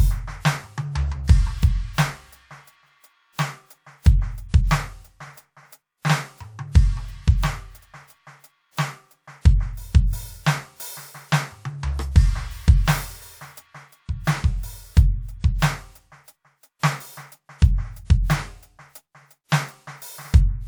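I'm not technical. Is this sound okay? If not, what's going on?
Yes, this music sounds fine, with no technical faults anywhere in it. There's nothing here you need to worry about or fix.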